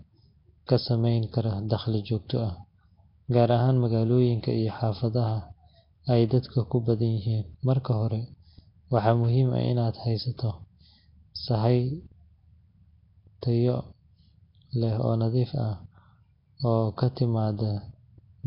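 Throughout the speech, the audio has likely been through Nellymoser compression, the Flash-era microphone codec that spends a fixed two bits per sample on short blocks and gives no bits to weak bands, filling those gaps with synthetic noise instead. The damage here is heavy. A rough, hissy halo surrounds the speech, everything sounds smeared and underwater, and nothing remains above 5.3 kHz, which fits a low rate near 22 kbps.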